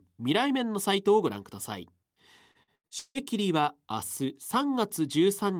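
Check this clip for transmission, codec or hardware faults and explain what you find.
Repeated packet loss (robotic sound) runs from 2.51 to 3.18 s. Five gaps of missing audio, the longest 161 ms, were each patched by stretching the preceding sound, so about half the span is concealed. The speech turns choppy, with pieces dropping out.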